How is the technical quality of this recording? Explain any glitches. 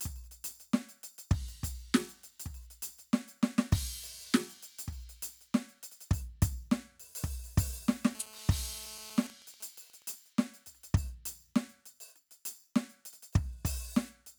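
Two bursts of radio interference from a nearby 2G phone spoil the music between 8.15 and 10.14 s.

GSM phone buzz, 8.15 to 9.27 s: a phone in an active call transmits 217 times a second, and the audio circuitry rectifies those pulses. The result is a hard, raspy 217 Hz buzz rich in harmonics, about 18 dB below the music and unrelated to it.

GSM signalling bursts, 9.30 to 10.14 s: with the call's talker silent, the phone sends only short groups of bursts, which get rectified the same way. This produces fainter, even ticks with a longer 217 Hz buzz twice a second, roughly 25 dB under the music.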